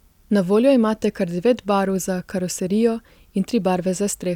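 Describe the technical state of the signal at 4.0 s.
At 4.0 s the speech signal is intact, with no audible technical fault at that moment.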